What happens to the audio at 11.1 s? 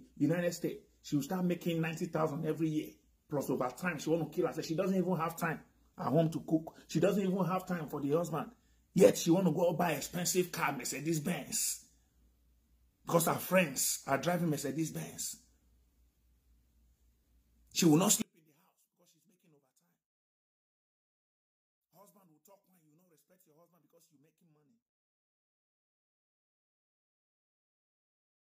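Nothing goes wrong at 11.1 s; the audio runs through that moment intact, with no dropout, click, distortion or other fault.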